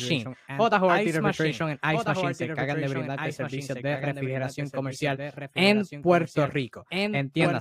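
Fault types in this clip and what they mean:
Doubled audio track: the speech is heard twice, with a clean, full-band second copy trailing about one and a half seconds behind, roughly 5 dB quieter, with no decay or room colour. The likely cause is the same signal captured again through a slower path.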